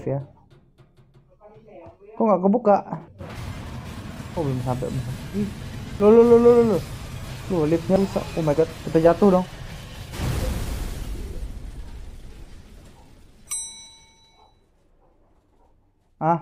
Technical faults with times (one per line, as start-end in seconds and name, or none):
3.08 dropped buffer (overrun)
6.00 dropped buffer (overrun)
7.96 dropped buffer (overrun)